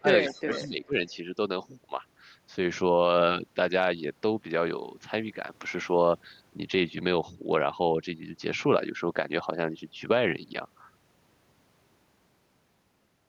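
It's a speech recording, and right at the start, from 0.0 to 0.96 s, the voice dips hard, falling by as much as 20 dB over roughly 700 ms of that stretch. That's likely speech suppressed in double talk, where the echo canceller clamped down on the talker while the far side was also speaking. Overlapping that, from 0.21 to 0.69 s, there's a faint delayed copy of the voice arriving 448 ms late, sitting way down, roughly 25 dB under the speech. It's likely echo leak, with some loudspeaker pickup slipping past the canceller and getting sent back.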